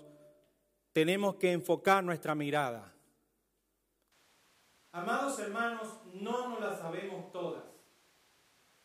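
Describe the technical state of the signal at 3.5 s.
At 3.5 s the speech signal is intact, with no audible dropout, distortion, glitch or other technical fault at that moment.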